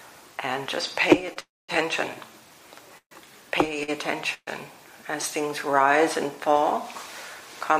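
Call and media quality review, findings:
Short stall from a late packet, 1.33–1.38 s: packet missed its playout slot, jitter buffer underran; receiver stretched the last sound about 25 ms, slight buzz or dip, playback resumes in place, nothing lost, delay up 25 ms.
Short stall from a late packet, 3.83–3.90 s: same jitter buffer underrun; last sound held about 48 ms with a slight buzz or dip, then continues from the same point; no audio lost, latency grows 48 ms.

Call audio freeze, 1.40–1.70 s: packets likely delayed in transit, jitter buffer emptied; concealment buzz or hiss fades into about 220 ms of silence, 286 ms inserted in total, audio picks up where it stopped, nothing missing.
Call audio freeze, 2.98–3.13 s: likely transit delay draining the jitter buffer; 135 ms gap filled by a decaying buzz or hiss then about 90 ms of silence; resumes intact, delay up 135 ms.
Call audio freeze, 4.34–4.49 s: jitter buffer likely starved by late packets; 129 ms inserted, short fading buzz or hiss then about 50 ms of silence; no content lost, playout resumes in place.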